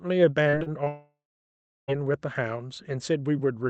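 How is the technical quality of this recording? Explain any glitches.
The recording is hampered by two connected network faults in its first two seconds. The speech comes through a call-style channel whose high end stops near 8 kHz, which points to an Opus codec at a modest bitrate.

Repeated packet loss (robotic sound), 0.43 to 0.88 s: The speech turns choppy and robotic over this stretch, with five short holes, the longest about 34 ms. The receiver patches each hole by stretching the preceding sound. With roughly 28 percent of the stretch made up this way, the patches pile on top of each other and give the speech a robotic quality.

Long network dropout, 0.88 to 1.90 s: Straight after the choppy stretch, the speech stops for about a second. At first there is a fading buzz or hiss carried over from the last sound, then around 0.7 s of silence before the speech returns with that second missing. 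The likely cause is a network dropout in which no audio arrived for the whole stretch. The receiver could only extend the last sound briefly before it faded to nothing.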